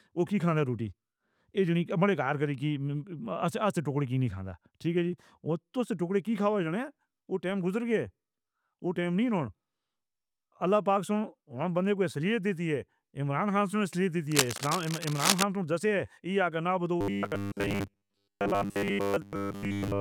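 Speech, with two faults. From 14.31 to 15.43 s, dense, uneven bursts of scratching and rustling sit over the speech. They are roughly as loud as the speech itself. This is cable scratch noise. A worn cable, connector or control was likely being moved, so its contact resistance jumped about rapidly. From 17.01 s to the end, the speech turns into a rigid, metallic buzz at 100 Hz. It still roughly tracks the speech. This is robotic sound from repeated short buffers. New audio arrives too rarely, so the last short slice is replayed to fill the gap. The 100 Hz pitch fits a 10 ms slice looping. Most of this stretch is repeats, and the real audio in between is skipped.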